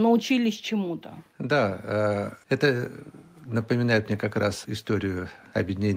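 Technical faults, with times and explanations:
0.05–0.8 s, automatic gain falling: the gain control judged the input too loud and eased back, so speech and background sink together by about 4 dB, unlike a talker simply softening.
1.48–2.96 s, automatic gain rising: the gain control judged the input too quiet and lifted it about 3 dB over roughly 1.5 s, with speech and background swelling together just before "напоминает мне как раз", rather than only the speech growing louder.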